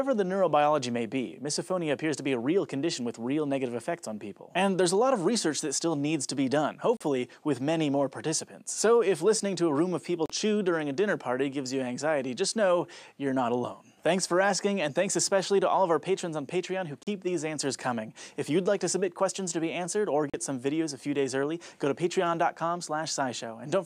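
At 6.97, 10.26, 17.03 and 20.30 s the sound cuts to silence for about 37 ms. Each gap has abrupt edges or a fade of a few milliseconds. Playback resumes further on, as if it had continued unheard. This is likely a Bluetooth dropout, and each gap fits two lost packets.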